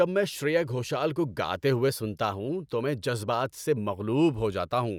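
Right after "شریا گھوشل کو گاتے", from 1.88 to 2.48 s, the speech suddenly runs 5.4% fast and 91 cents sharp, then snaps back before "تو میں جذبات سے". That's a drift correction step, likely a clock-matching resampler briefly changing its rate to rebalance its buffer.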